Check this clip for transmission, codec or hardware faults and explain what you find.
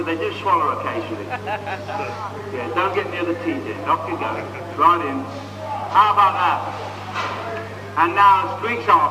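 One hardware fault runs through the whole clip: sample clock jitter. The converter's timing wanders by a microsecond or two, so each sample lands slightly early or late. On steep, loud, bright passages this leaves a grainy hiss roughly 40 dB below the sound. Unlike a steady noise floor, the roughness vanishes in quiet gaps.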